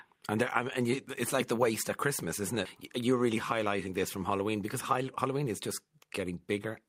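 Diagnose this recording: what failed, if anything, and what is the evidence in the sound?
Network and jitter-buffer trouble. At 2.65 to 2.67 s there's a skip ahead: something like 0.4 s of speech is simply gone, with nothing filled in. The audio was dropped either in transit or by an overflowing jitter buffer, so playback jumps straight to later speech.

Then from 3.25 to 3.89 s you get a jitter buffer speed-up. The buffer was holding more than its target, so it trimmed pitch-period-sized chunks, roughly 50 ms in all. Pitch stays put, but the speech runs at 106% and sounds hurried.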